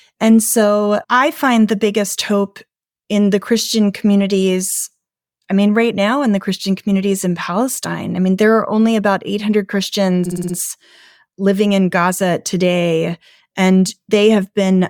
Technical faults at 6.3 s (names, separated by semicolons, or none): none